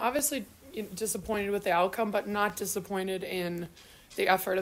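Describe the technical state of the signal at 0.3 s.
A short click recurs about every 1.16 s from 0.19 s to 3.66 s, roughly four in all, and 0.3 s falls within that run. These are likely clock drift buffer slips: two clocks disagree by around a tenth of a percent, so a buffer drops or repeats a block of roughly 50 samples each time.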